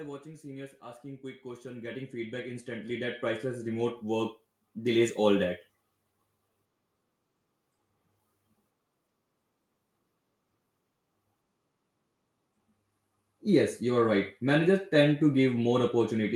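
From 0.23 s to 5.11 s the automatic gain rises: the gain control judged the input too quiet and pushed its gain up by about 17 dB over nearly five seconds, so the speech and the background noise swell together in one steady climb.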